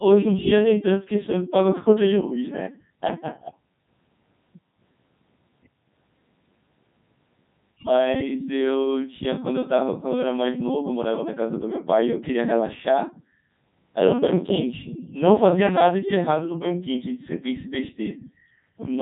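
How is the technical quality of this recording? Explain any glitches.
Poor: the whole recording has gone through a Codec 2 vocoder, with heavy damage that fits its 3.2 kbit/s mode. Throughout, the original waveform is discarded and the speech rebuilt from sine waves, so it sounds robotic and buzzy; a spectrogram shows tidy synthetic harmonic lines cut off at 3.8 kHz.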